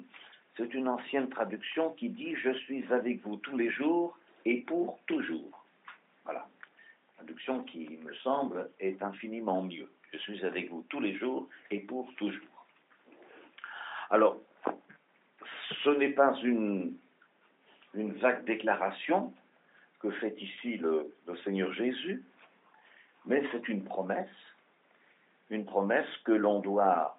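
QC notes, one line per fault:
No fault found, so there is nothing to note for QC.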